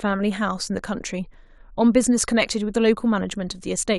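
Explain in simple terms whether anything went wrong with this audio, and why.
Nothing went wrong here; it's just a short bit of speech with no glitches, dropouts or odd noises to point to at any moment.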